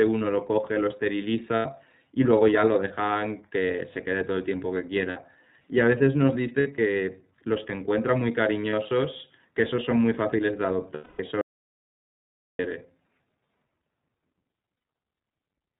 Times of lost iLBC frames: 1.55-1.66, 5.10-5.17, 6.60-6.68, 8.70-8.73, 10.94-11.20, 14.75-14.84

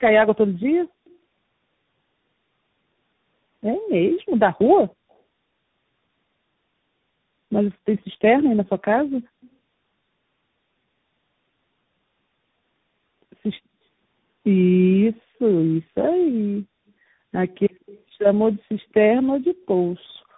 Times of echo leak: 1.05-1.10, 18.81-18.86

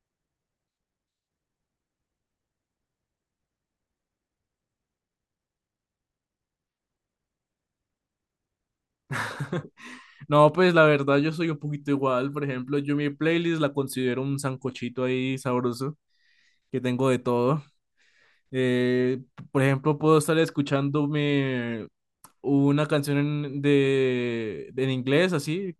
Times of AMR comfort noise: none

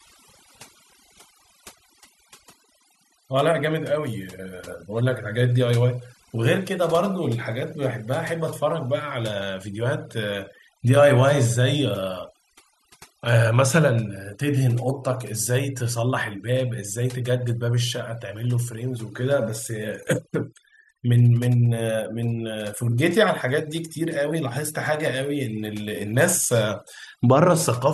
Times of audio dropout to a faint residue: none

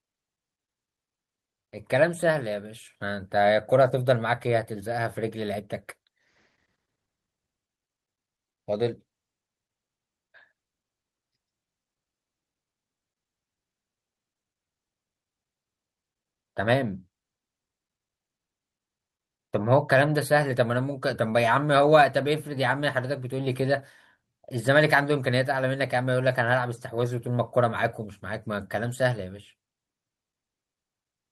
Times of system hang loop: none

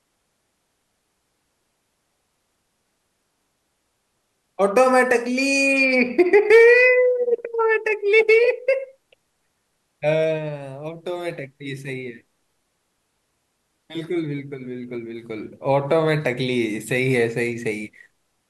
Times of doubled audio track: none

